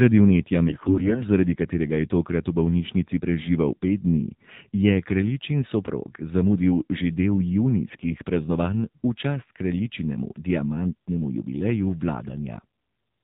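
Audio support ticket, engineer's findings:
AMR narrowband mobile codec, whole clip. Hard band limit at 4 kHz, nothing above passes; buzzy, synthetic speech timbre. Mode sounds like 7.4 kbps, a low AMR-NB rate. Component: mobile leg of the call. Mechanism: 8 kHz sampling plus a vocal-tract model excited by a few pulses per 5 ms subframe of each 20 ms frame. At this bit budget the pulse excitation is sparse, so detail goes and the buzz is plainly audible.

AMR bit errors, 0.68–1.22 s and 7.90–8.05 s. Speech keeps its pitch and level but turns hoarse, scratchy and gargly. First burst is heavier, around one bit in ten corrupted; second is milder, roughly half that. Component: weak radio link. Mechanism: less-protected bits arrive flipped while the checksum on the core bits still passes, so the frames are decoded anyway. Excitation pulses land in wrong positions, and the fine pitch, gain and spectral values come out wrong.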